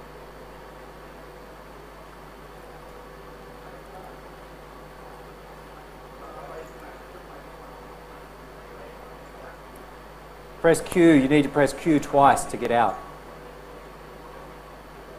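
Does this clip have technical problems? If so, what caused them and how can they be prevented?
Yes. Regular clicks every 1.85 s from 1.58 to 14.50 s are clock drift buffer slips, likely from two unsynchronised clocks dropping or repeating a few tens of samples. Lock both devices to one shared word clock.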